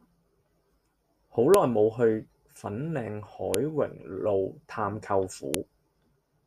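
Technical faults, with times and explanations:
1.54 s, 3.54 s and 5.54 s: file header played as audio. Each is a sharp, loud click or snap lasting only a moment, arriving every 2.0 s regardless of what the speech is doing. The audio appears to have been assembled from separate 2-second WAV pieces joined or streamed end to end without their headers being stripped. The few dozen header bytes at the start of each piece are played back as sample values, producing a brief burst unrelated to the waveform around it.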